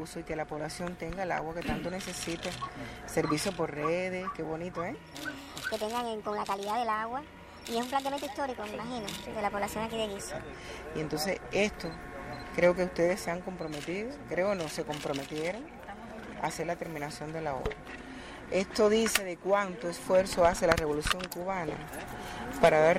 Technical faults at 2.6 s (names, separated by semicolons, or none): none